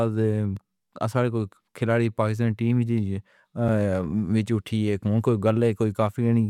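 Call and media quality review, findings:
Block of digital silence at 0.57 s: tick, roughly 1.3 ms dropout. Fits a 64-sample block at 48 kHz not filled in time. Waveform is flat with hard edges; spectrogram shows a thin full-band vertical line.

Block of digital silence at 3.68 s: tick, about 5.3 ms hole, consistent with a 256-sample buffer underrun. Same signature: flat segment, abrupt cuts, broadband click stripe at each edge.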